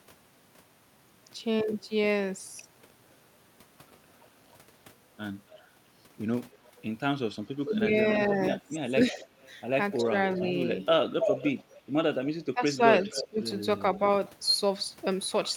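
At 5.5–5.67 s and 6.51–6.82 s, faint echo leak appears: a copy of the speech returns about 285 ms late, roughly 25 and 35 dB down. This is likely a loudspeaker-side echo canceller passing residual microphone pickup back into the call. At 7.64–7.91 s, speech is suppressed in double talk. The talker dips by about 10 dB for brief fragments, likely because the canceller mistook the overlap for echo and attenuated everything. From 8.32 to 12.29 s the echo leak is strong, only about 5 dB below the speech, with the same delay of roughly 285 ms. Double-talk suppression recurs within it at 8.79–9.21 s and 10.02–10.14 s, as short 10 dB dropouts. At 12.54–13.39 s the suppression deepens to around 20 dB. At 13.04–13.45 s, echo returns at about 10 dB down, with a delay of 287 ms.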